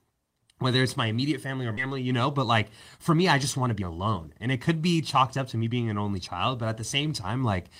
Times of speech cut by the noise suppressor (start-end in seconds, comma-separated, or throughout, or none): none